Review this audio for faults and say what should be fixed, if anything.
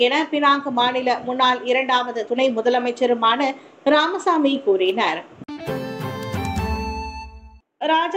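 Two bit error spikes stand out, at 4.89 s and 6.23 s. Each is one sharp, broadband tick reaching about -17 dBFS. A flipped bit makes a sample or two jump by a power of two, then return. The ticks are unrelated to the surrounding sound. Both should be repaired. Error-checked memory and links, or checksums on transfers, would prevent such flips.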